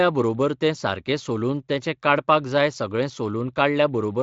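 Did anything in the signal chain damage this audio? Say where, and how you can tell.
No, nothing in the chain damaged this speech; it has been through a Speex codec, heard as a band that ends near 7.6 kHz and a light coding texture, which is that stage working as intended.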